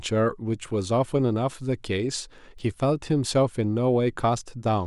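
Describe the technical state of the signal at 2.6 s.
At 2.59 s there's a bit error spike: a flipped bit in a few consecutive samples makes the value jump by a power of two and snap straight back. You hear it as one sharp, broadband tick over the speech, peaking around -37 dBFS and unrelated to the signal.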